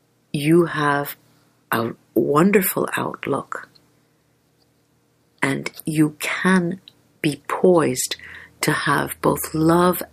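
No technical faults can be heard in this audio, so there is nothing to describe in time order.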